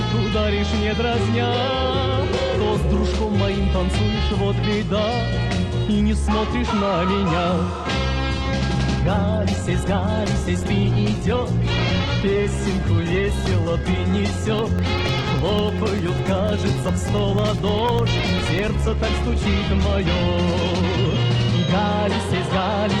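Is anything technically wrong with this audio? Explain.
Yes, two faults. From 8.97 to 20.97 s, the adaptive stream drops to a lower bitrate, consistent with a fall from about 64 to about 12 kbit/s. Codec artefacts rise, and the quality changes abruptly with no gap, unlike a dropout. From 14.59 to 18.59 s, periodic USB or driver dropouts blank roughly a millisecond every 0.1 s, giving about forty evenly spaced ticks. Their clockwork regularity separates them from the codec's smeared artefacts.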